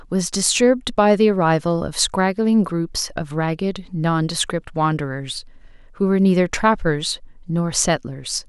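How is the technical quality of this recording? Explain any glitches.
No glitches to explain: the speech recording runs steady throughout with no technical faults.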